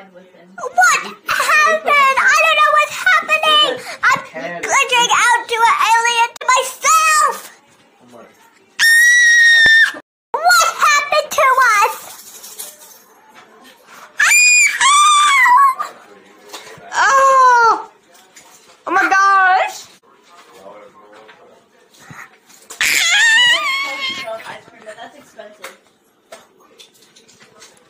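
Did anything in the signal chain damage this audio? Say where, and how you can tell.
Yes. At the buffer stage, an underrun with held sample at 9.66 s. The waveform holds flat for 0.73 ms, then resumes softly, with no audio lost.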